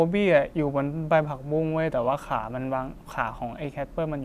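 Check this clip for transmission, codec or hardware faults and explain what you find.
Nothing in the recording points to a transmission, codec or hardware fault. The speech comes through steadily, with no audible breaks, glitches or disturbances at any point.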